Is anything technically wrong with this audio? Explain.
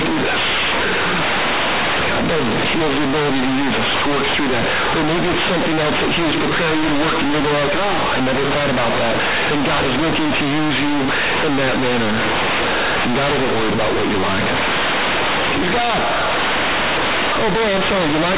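Yes. Throughout the clip, companded audio is read as linear: the speech was coded as A-law, but the bytes are being played back as plain linear 8-bit samples without expansion. Because the sign of each A-law value sits in the top bit, every change of sign flings the output across about half its range, and because the values sit on a logarithmic scale, quiet passages come out as large as loud ones. The result is harsh, very loud, buzzy distortion, with heavy noise filling the pauses.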